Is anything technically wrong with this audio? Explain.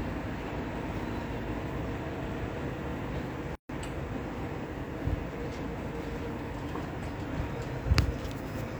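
Yes. From 3.55 to 3.69 s there is a gap at a join of encoded pieces: separately encoded segments were butted together untrimmed, so encoder delay and final-frame padding leave a gap of about 141 ms. Unlike a dropout, the sound resumes exactly where it stopped, with smeared edges.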